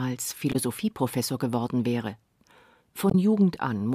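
At 0.52 to 0.56 s and again at 3.10 to 3.15 s, damaged data in the compressed stream makes the decoder lose sync briefly, leaving short glitches in the speech.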